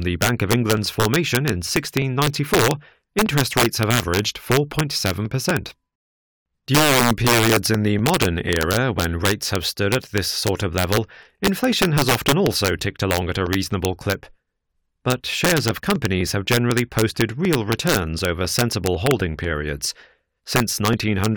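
Integer overflow runs through the whole clip. The speech is driven about 7 dB past the integer limit. Instead of being held at the ceiling, the loudest peaks wrap around to the opposite sign. Each one jumps across the full range in a single step. Only a small share of samples, around half a percent, go over. They fall on the loudest syllables. There they sound like violent cracks, far harsher than ordinary clipping.

Periodic USB or driver dropouts begin at 0.27 s and continue to 21.18 s. Every 0.249 s a tiny slice of audio goes missing. Each slice lasts around a millisecond. It is skipped, not filled with silence, so the waveform jumps. That regular spacing points to a background task stalling the bus or driver. There are roughly a hundred of these. They come through as steady ticks, heard only while speech is present.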